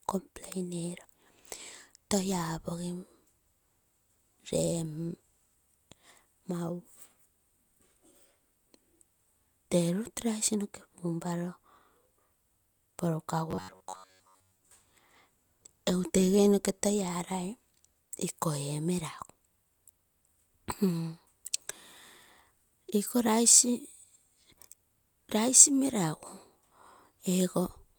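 Robotic sound from repeated short buffers runs from 13.51 to 14.72 s. The speech turns into a rigid metallic buzz fixed at 93.8 Hz, still loosely following the words. Likely, late audio left a 10.7 ms fragment replaying through most of that stretch.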